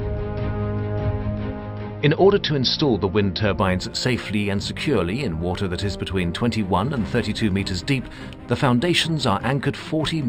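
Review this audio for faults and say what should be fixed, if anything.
From 3.59 s to the end, the audio was raised to a higher sample rate by linear interpolation, which fits a 12 kHz source taken up to 44.1 kHz. This imaging from linear upsampling dulls the top of the original band. Mirror images between 6 kHz and 12 kHz sit roughly 25 dB under the signal and add a faint metallic shimmer to bright, sharp sounds. To prevent it, resample with a proper band-limited, steep anti-imaging filter rather than straight-line interpolation.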